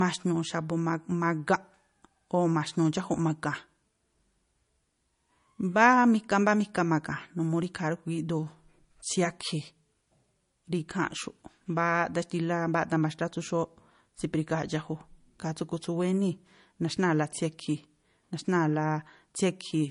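From start to end, the speech has nothing above 10.6 kHz. It also carries the smeared, swirly texture of heavy compression. The likely cause is low-bitrate audio saved at a high bitrate. The sound fits a 40 kbit/s MP3 re-encoded at 256 kbit/s. The larger file cannot restore what the first encoding removed.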